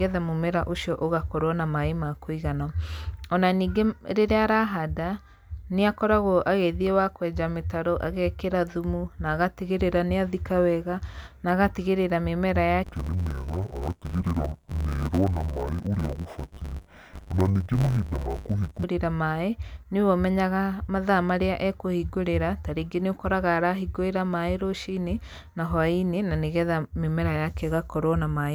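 From 12.84 to 18.84 s, interleaved audio gets read as planar in 10 ms blocks, so the speech turns dull and robotic, buzzing at 100 Hz.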